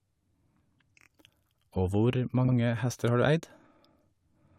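At 1.01 s the speech stutters. A block of about 23 ms, the length of a single compressed frame, plays three times in a row. That adds 46 ms. This is repeated frames: the same encoded data was passed to the decoder more than once. At 2.47 s it happens again, just before "hester har du". A 70 ms stretch, three frames' worth, plays twice, adding another 70 ms. Each repeat gives a brief jolt where the stream jumps back.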